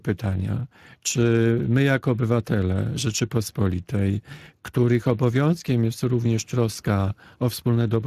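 From start to finish the speech carries plainly audible Speex codec damage, a hoarse, noisy roughness, consistent with a bitrate near 22 kbps. A spectrogram shows smeared, grainy harmonics and a flat ceiling with nothing above 15.2 kHz.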